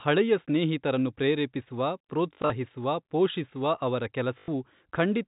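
Packet loss with last packet repeated breaks this speech clip at 2.34–2.5 s and 4.38–4.48 s, after "ಪೋಷಿಸುವ ಅವರ". Replayed packets buzz robotically near 50 Hz, which fits 20 ms packets.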